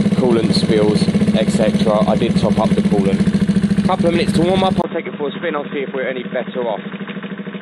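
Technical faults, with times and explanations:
4.82 to 7.61 s, input switched to a poorer device: right at 4.82 s there's a brief gap of about 20 ms, and then the sound comes back duller and boxier, with nothing above 3.8 kHz. It drops roughly 10 dB in level and picks up a new background noise sitting a good way under the signal. That combination of a narrower band, a different tone and a different noise floor most likely means the recording jumped to a lower-grade input, such as another mic or a headset's call profile, and stayed there to the end.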